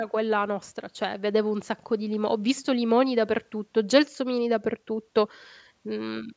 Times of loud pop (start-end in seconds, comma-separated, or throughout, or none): none